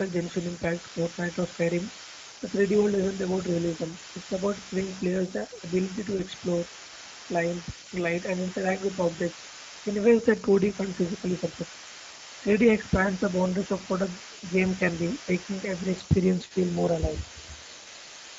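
Throughout, the speech sounds hoarse and noisy, plainly audible Speex codec damage from starved excitation coding, fitting a mode near 16.8 kbps. From start to end, a faint second voice sits about 20 dB below the talker, likely the other side's voice leaking through an incomplete echo canceller. From 6.17 to 6.23 s, the sound smears into a brief stretched, fading sound: VoIP packet loss concealed by the speech codec, consistent with one lost 20 ms frame.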